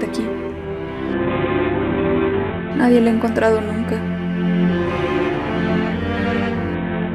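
From 1.13 to 2.71 s, and again from 6.74 s to the end, a Bluetooth SBC bit pool drop dulls the treble and lays a gritty noise over the sound. The collapse points to the bit pool falling from around 28 to about 5, near 54 kbps, starving the upper sub-bands. On a spectrogram the high band goes dark abruptly in both spans, with speckled quantisation noise below, while the waveform envelope stays largely intact.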